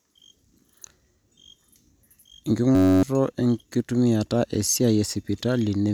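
A speech clip with a system hang loop from 2.75 to 3.03 s. A 10.67 ms slice, which fits a 512-sample buffer, repeats 26 times, giving a steady 93.8 Hz buzz and losing about a third of a second of audio. The waveform shows identical periods, and the spectrogram shows evenly spaced harmonic lines.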